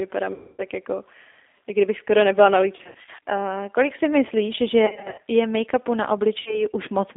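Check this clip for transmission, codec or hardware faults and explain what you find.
Two faults are present: the speech goes through a low-bitrate codec throughout, and four packet-loss gaps are patched over by concealment.

Throughout the clip, the speech sounds rough, slightly synthetic and boxy, confined to roughly 300 Hz to 3.6 kHz, which fits the G.729 codec at 8 kbit/s rebuilding speech from a coarse filter-and-pulse model.

At 0.34–0.62 s, 2.76–3.10 s, 4.86–5.23 s and 6.40–6.65 s, the speech smears into a buzzy tone or coloured noise that fades. This is VoIP packet loss concealed by the speech codec, which stretches the last pitch and filter over the missing audio. The first gap covers about 250 ms. The second and third are scattered losses with runs up to 70 ms and 60 ms. The fourth covers about 60 ms.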